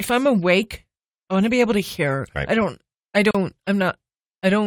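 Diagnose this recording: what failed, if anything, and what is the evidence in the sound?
The failure is at the codec stage: the recording was encoded in separate pieces and spliced without trimming the encoder's start-up delay and final-frame padding, leaving a gap at a join of encoded pieces. Just after "I don't I", the speech drops out from 3.31 to 3.35 s, a silence of about 37 ms with edges smeared by the codec, then resumes exactly where it left off. The untrimmed padding inserts dead time without losing any content.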